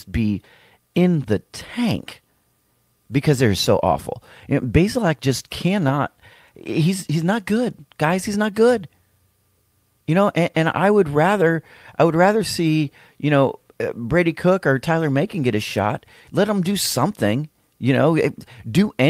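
No technical faults turn up at any point in the recording. The speech continues steadily, with nothing audibly going wrong.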